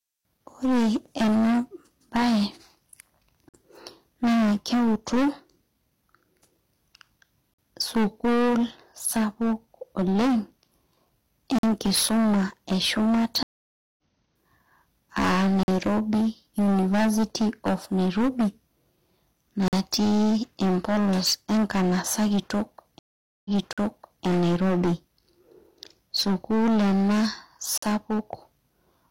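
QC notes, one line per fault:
Throughout: hard clipping. The signal is driven about 18 dB past what the chain can pass, so roughly a fifth of all samples have their peaks cut flat. The squared-off tops add high harmonics, giving a harsh, fuzzy distortion on every loud moment of the speech.
3.49, 7.54, 11.59, 15.63, 19.68, 23.73 and 27.78 s: gap between chunks. The audio arrives in 4-second chunks, and about 48 ms of silence is left at each join. Nothing is lost, but each join is heard as a short hole repeating every 4 s.
13.43 to 13.98 s and 22.99 to 24.24 s: stream reconnect. The connection dropped and a fresh decoder restarted mid-stream. The first break is 548 ms of silence and resumes roughly 0.3 s later. The second is 462 ms of silence and resumes 743 ms earlier, so that stretch repeats.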